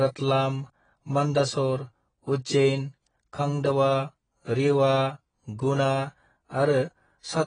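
From the first moment the speech sounds dull and a bit smeared, with nothing above 9.7 kHz and a watery, fizzy edge on the sibilants. That's heavy damage of the kind you get from AAC compression, likely AAC-LC squeezed down to something around 22 kbps. At that rate the encoder can't afford the upper band, so it pulls the cut-off down, thins out the spectrum, and leaves the warble you hear on anything sustained.

On top of that there are two bit error spikes, single-sample ticks at 2.33 s and 4.50 s. Each one is a lone sharp click, broadband and completely unrelated to the speech around it. What's happening is a single flipped bit in one sample, so the value jumps by a power of two for just that instant and then snaps straight back, which is why it's so short and sounds so foreign to the signal.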